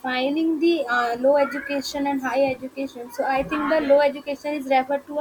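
Low bit depth without dither runs through the whole of this speech recording, from start to end. Quiet passages and decaying syllables turn grainy, with a gritty distortion that follows the sound rather than sitting as steady hiss, about 40 dB below the signal. The quietest moments sputter or drop out between steps. This is likely because the samples were rounded to a coarse grid without dither, which fits roughly 9-bit resolution.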